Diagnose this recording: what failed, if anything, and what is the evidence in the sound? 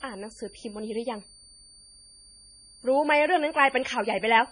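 A switching supply whistle in the analogue power path runs throughout: a thin tone drifting between 4.58 and 4.63 kHz, about 30 dB below the speech, drawn as a faint horizontal line on a spectrogram.

At the codec stage, heavy watery, swirly smearing runs throughout, with nothing above 10.6 kHz. This is likely MP3 compression near 24 kbps, shown on a spectrogram as a hard ceiling and flickering gaps.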